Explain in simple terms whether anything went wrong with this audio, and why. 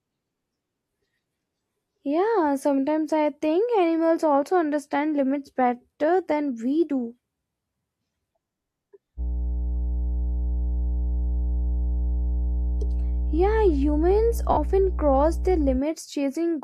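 Yes, two things went wrong. From 9.16 to 15.81 s, mains hum appears: the recording picked up electricity from the power supply, likely through a ground loop or nearby transformer. That adds a steady, fairly loud low 60 Hz drone underneath the speech.

Inside that stretch, at 14.52 to 14.58 s, there is AAC frame loss with concealment. A small piece of the compressed stream, about 43 ms and consistent with one lost frame, never arrived, so the decoder guessed from the sound just before it. That leaves a brief smeared, noisy blip.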